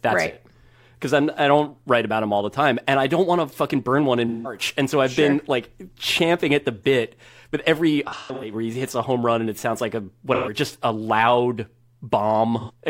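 AAC frame loss with concealment occurs at 4.27 s, 8.07 s, 10.34 s and 12.60 s. Blocks of coded speech went missing, and the decoder filled each gap by repeating the last good spectrum with scrambled phase. Each gap therefore sounds like a smeared, noisy patch rather than silence. About 171 ms is lost at 4.27 s, 128 ms at 10.34 s and 85 ms at 12.60 s. At 8.07 s, 256 ms is lost in pieces spread over 341 ms, the longest run around 150 ms.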